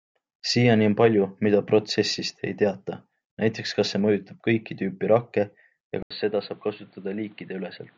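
At 6.03 s the speech drops out for 80 ms, then returns duller and boxy, with nothing above 4.5 kHz, about 5 dB quieter, and over a new noise floor some 35 dB down, likely an input switched to a poorer device. Unlike a filter, the gap, level and noise change together.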